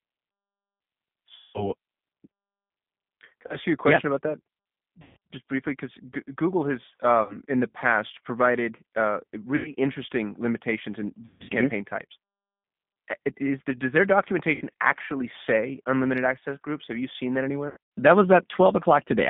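The whole speech clip has passed through a G.729 codec, the 8 kbit/s VoIP coder that rebuilds each 10 ms frame from a vocal tract filter, a pitch predictor and a few pulses instead of the original waveform. The line band runs from about 150 Hz to 3.6 kHz, so everything above is missing, and the codec damage is plainly audible as a rough, synthetic texture.

VoIP packet loss concealed by the speech codec occurs eight times. With the packets gone, the decoder keeps re-running its last pitch and filter at falling gain, which smears the sound into a fading buzz or coloured noise. Because each frame builds on the one before, the sound stays weak or warped for a while after the packets return. About 180 ms is lost at 1.36 s, and about 30 ms at 3.47 s. At 5.02 s about 150 ms is lost before "just briefly because". At 7.23 s about 60 ms drops out. At 9.56 s about 90 ms goes missing between "the past provided uh" and "interesting limitations in". 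At 11.25 s about 210 ms is lost across 240 ms, including a 150 ms run. At 14.55 s about 60 ms falls between "the does their" and "actually say unlimited access". At 17.68 s about 180 ms is scattered across 240 ms, with the longest run lasting 90 ms.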